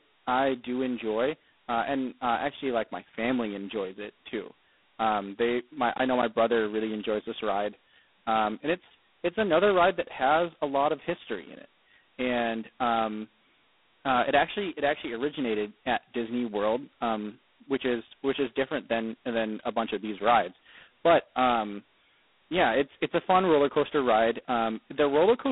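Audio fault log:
Throughout: G.726 ADPCM. The speech carries a harsh, rasping hiss that rises and falls with its level, the heavy damage of a coder spending very few bits per sample on the difference from its adaptive prediction, which fits the 16 kbit/s mode. The line passes roughly 200 Hz to 3.6 kHz, with nothing above 3.9 kHz, giving a narrow telephone-band sound.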